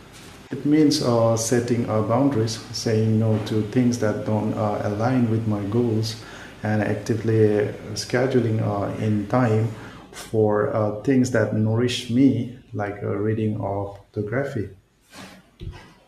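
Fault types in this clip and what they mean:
No fault types are present in this clip.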